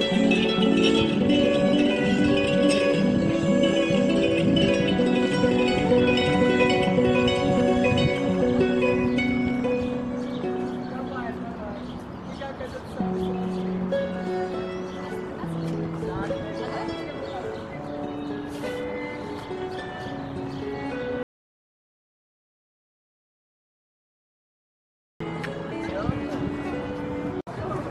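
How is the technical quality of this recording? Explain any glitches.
The recording has one clear glitch, an audio dropout to silence. From 21.23 s to 25.20 s the sound cuts out completely, with no room tone, for about 4.0 s; the input was likely lost while zeros kept being written.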